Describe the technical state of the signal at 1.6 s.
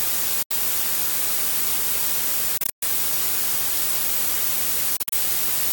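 At 1.6 s the signal is intact, with no audible fault at that moment.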